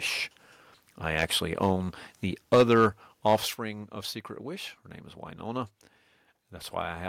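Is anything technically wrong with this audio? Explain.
Yes. The speech has two related faults: microphone overload on the loudest moments, and the microphone volume stepped down twice in sudden drops.

Microphone overload occurs at 1.19–1.24 s, 2.53–2.86 s and 3.27–3.35 s. The likely cause is input gain set so high that the peaks exceed the converter's ceiling, by about 4 dB, about 7 dB and about 4 dB respectively. The tops of those waveforms are flattened, with only a small share of samples affected in the first event and a few percent in the other two. This produces a harsh, crackling edge on those syllables.

The microphone volume is stepped down at 2.55 s by about 3 dB and at 3.54 s by about 8 dB. The likely cause is the call software detecting the clipping and reducing the device's input level in a single jump rather than a smooth fade. The first step lands inside the 2.53–2.86 s overload. 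The second follows shortly after the 3.27–3.35 s one. Each time, the speech and the background noise fall together abruptly.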